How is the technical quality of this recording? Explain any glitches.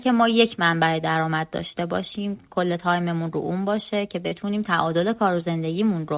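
The recording has one audible glitch, heard against a narrowband call path with nothing above 4 kHz, which fits a telephone-grade codec such as G.711.

At 4.28 to 4.34 s there is a short concealed packet loss. About 30 ms of audio did not arrive at the decoder in time, so the receiver synthesised roughly 30 ms to cover the gap by extending the preceding signal, then crossfaded back into the received stream. The result is a brief smear or wobble in the speech.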